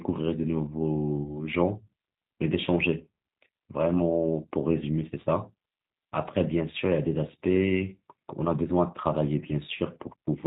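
Throughout, the speech sounds slightly rough and synthetic, with no content above 4 kHz. This is the G.729 codec, here its G.729A form at 8 kbit/s, and the damage is plainly audible. Rather than sending the waveform, it rebuilds each 10 ms frame from a vocal tract filter, a pitch predictor and a handful of pulses, which gives the voice its rough, synthetic edge.

From 1.24 s to 1.39 s the speech briefly smears into a stretched sound that fades and then takes a moment to recover its strength. This is VoIP packet loss concealed by the speech codec. About 20 ms of audio went missing, which fits a single lost packet. The decoder filled the gap by extending its last pitch and filter settings at falling gain, and because each frame builds on the previous one, the weakened sound lingers past the gap itself.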